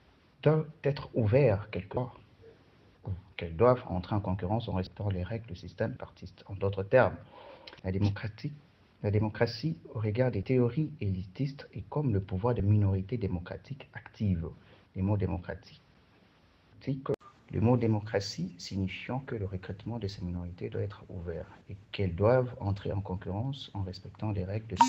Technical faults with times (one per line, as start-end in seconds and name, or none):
1.96 compressed frames skipped
4.86 compressed frames skipped
5.96 compressed frames skipped
7.79 compressed frames skipped
10.43 compressed frames skipped
12.59 compressed frames skipped